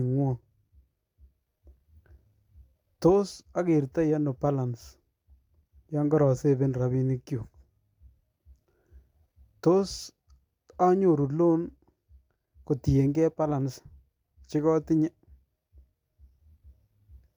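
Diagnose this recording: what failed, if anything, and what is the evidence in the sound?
Listening to the recording turned up nothing that points to a failure at any stage between capture and playback.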